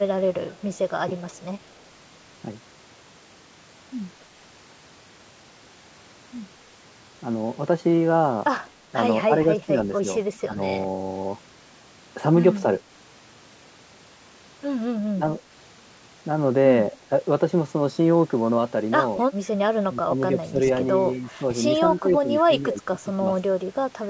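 A faint, delayed copy of the speech trails behind the talker at 0.52–0.78 s, 1.31–1.74 s and briefly at 19.2–19.25 s, arriving about 0.22 s late and sitting roughly 30 to 35 dB under the main speech. This is echo leak, most likely because the far end plays the call over a loudspeaker and its echo canceller failed to strip out everything its microphone picked up, so a residue of the voice came back. The talker's speech also dips in level or drops out in short pieces at 9.27–10.59 s, 15.14–15.41 s, 19.88–20.6 s, 21.17–21.41 s and 22.0–23.22 s. The deepest dips reach around 15 dB, while the one at 21.17 s is only a slight sag. This pattern is speech suppressed in double talk. It is likely caused by both sides speaking at once, when the echo canceller could not tell the local talker from the loudspeaker echo and turned both down together. The audio stays within the call's microphone processing band, with nothing above 8 kHz.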